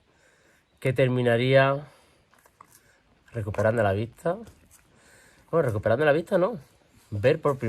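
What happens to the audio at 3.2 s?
Nothing goes wrong at 3.2 s; the audio there plays through intact, with no dropout, glitch or other fault.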